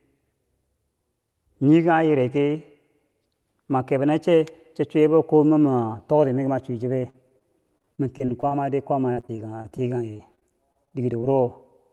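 Repeated packet loss (robotic sound), 6.99–8.53 s and 9.15–11.25 s: frequent dropouts up to 39 ms, patched by extending prior sound, make the speech choppy.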